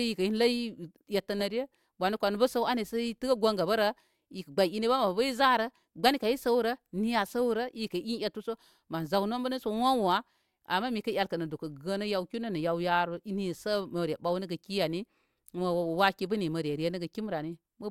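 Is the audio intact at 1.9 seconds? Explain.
No. At 1.9 seconds, as throughout the speech, there is a filter restarted on every block. The filter drops its memory at each block boundary and starts again from silence, so every block opens with a small transient. These repeat every 20 ms and fuse into a 50 Hz buzz. Unlike mains hum at the same pitch, this buzz rises and falls with the speech level and fades in the pauses.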